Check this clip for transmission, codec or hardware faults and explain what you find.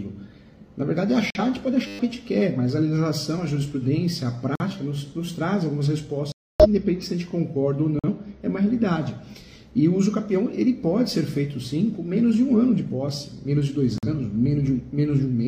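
Two kinds of fault are present: repeated dropouts from corrupt frame muting, and one brief buzz from a system hang loop.

Corrupt frame muted: abrupt silent holes at 1.30–1.40 s, 4.55–4.66 s, 6.32–6.66 s, 7.99–8.08 s and 13.98–14.08 s. Damaged compressed frames were rejected by the decoder and replaced with silence, so timing holds steady.

System hang loop: from 1.87 to 1.99 s, a steady buzz at 100 Hz. The system froze while the hardware replayed a 10 ms buffer twelve times, losing about a tenth of a second of audio.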